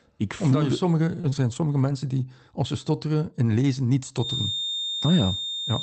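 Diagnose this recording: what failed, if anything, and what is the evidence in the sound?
Network stage, short concealed packet loss: at 1.21–1.25 s, right after "je sommige", and again at 1.29–1.34 s, about 20 ms of the speech stream never arrived in time. The receiver covered each hole by extending the preceding sound, which leaves a brief smear or wobble where the real waveform should be. The telltale difference from error-correction recovery is that this fill is invented from what came before, so a short consonant can simply vanish.

Network and codec stage, lost packet rebuilt from error correction: twelve separate losses fall between 1.23 and 1.94 s, most of them single 20 ms frames. The last ones come just before "die als ze stotteren". There is no gap here, because the Opus packet following each loss carried a low-bitrate copy that the decoder played instead. The giveaway is a rougher, noisier texture on those frames rather than a smear. 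Outside these spots the Opus call path sounds as its 32 kbps setting would lead you to expect.

Acoustic stage, feedback whistle: from 4.14 s to the end, after "stotteren in lezen niet", a thin, steady 3.6 kHz tone sits about 5 dB under the speech and swells and fades slowly in level. This is most likely loudspeaker sound leaking back into the microphone with the loop poised right at the edge of feedback. It is not electrical hum, which would sit at mains frequencies. Unlike a codec artefact, the tone persists independently of the speech.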